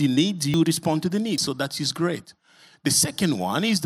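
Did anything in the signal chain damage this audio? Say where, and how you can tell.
Yes. At 0.54 s, just before "respond to the", and at 1.38 s, just after it, the speech skips ahead about 70 ms without silence. This is likely a dropped buffer (overrun) at the driver stage. The waveform shows a sudden step, and the spectrogram a thin broadband stripe.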